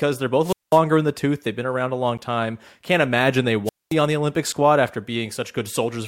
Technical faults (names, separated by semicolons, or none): wireless microphone squelch dropout; block of digital silence